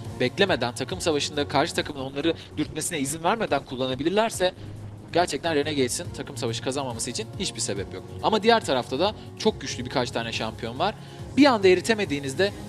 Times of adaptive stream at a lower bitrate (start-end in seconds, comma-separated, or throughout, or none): 1.91-5.91